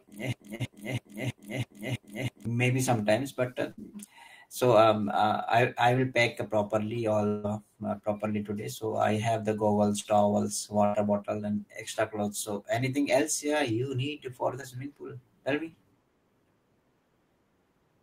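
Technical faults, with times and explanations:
0.00–2.45 s, broken-record loop: a 0.33 s speech fragment repeats seven times back to back into "sometimes but uh", likely from a stalled player resending its last buffer.
0.55–0.61 s, 10.00–10.13 s, 14.61–14.64 s, short concealed packet loss: brief smears or wobbles where 20 to 40 ms of lost audio were bridged by extending the preceding sound.
3.71–3.79 s and 10.85–10.95 s, burst of packet loss: a fading continuation of the last sound, about 60 and 80 ms long, follows "sometimes but uh" and precedes "bottle and extra clothes". Consecutive lost packets were concealed, so that speech is gone.
7.27–7.46 s, long network dropout: a fading continuation of the last sound of about 0.16 s replaces the speech, which then resumes with that stretch missing, likely because no packets arrived.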